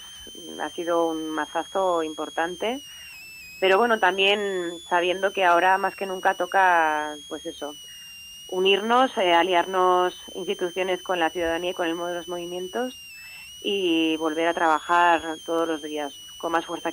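A switching power supply is running in an audible burst mode or beating with another one, leaving a switching supply whistle throughout: a high whine around 3 kHz, drifting between 2.5 and 3.46 kHz, about 20 dB below the sound.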